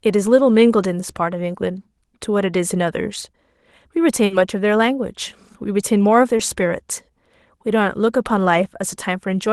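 Short concealed packet loss at 3.21 to 3.23 s and again at 6.37 to 6.40 s: about 10 and 20 ms of speech arrived too late, so the receiver stretched the preceding sound across each gap and blended back, leaving a brief smear. A burst of packet loss at 4.25 to 4.31 s drops about 50 ms; the last sound is held and faded, then speech resumes with that stretch missing.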